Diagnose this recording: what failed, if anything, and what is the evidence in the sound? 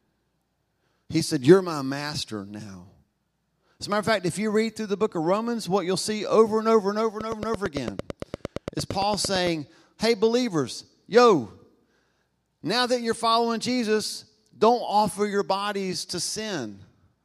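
Regular ticking, a train of clicks at 8.8 per second, runs 7.21 to 9.48 s after "and over and over", likely interference on analogue wiring.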